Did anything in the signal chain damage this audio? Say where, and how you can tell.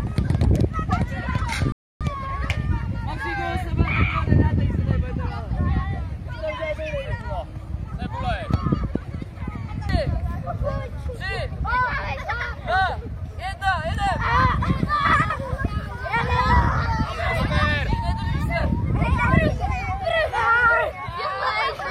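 Yes, a rebuffering stall at playback: silence from 1.72 to 2.01 s, then the sound resumes exactly where it stopped, adding 0.29 s while losing nothing.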